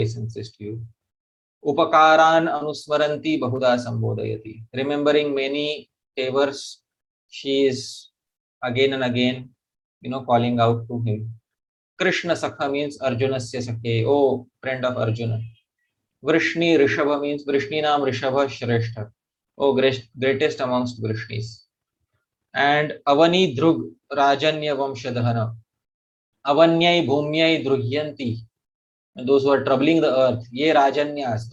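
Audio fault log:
2.57–2.63 s and 3.56–3.59 s, short concealed packet loss: about 20 ms went missing each time, and the receiver extended the previous sound to cover it, leaving brief smeary wobbles.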